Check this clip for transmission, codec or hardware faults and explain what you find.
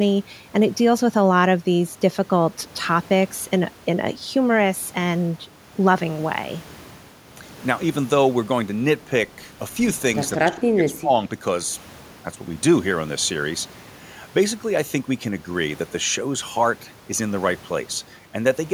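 One fault turns up: speech suppressed in double talk, from 10.43 to 11.11 s. With both ends talking at once, the echo canceller likely mistook this talker for loudspeaker echo and attenuated it, so the speech sinks by around 25 dB for under a second.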